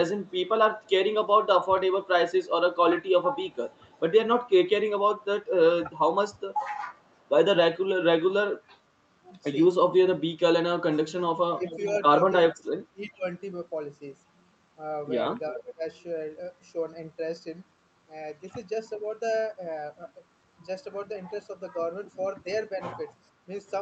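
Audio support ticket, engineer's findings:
Faint delayed repeat of the speech, about 0.4 s behind the original, at 0.24–0.31, 3.52–3.93, 11.62–11.97 and 15.5–15.58 s. Echo leak. First two very quiet, about 40 dB under the speech; the last two much more audible, about 20–25 dB down. Likely cause: far-end loudspeaker pickup not fully removed by the echo canceller and returned on the uplink. The fixed 398 ms delay points to a single constant acoustic/network loop.

Speech dips sharply while the other side is talking, at 11.54–11.63, 12.48–13.25 and 15.55–15.85 s. Speech suppressed in double talk. Deepest drops about 25 dB, 35 dB and 20 dB. The 12.48–13.25 s stretch is worst, with roughly half a second pulled down. Likely cause: the canceller cannot separate local talker from echo and attenuates both. These dips overlap the stronger echo leaks at 11.6 and 15.5 s, all sitting on an Opus path band-limited to 8 kHz.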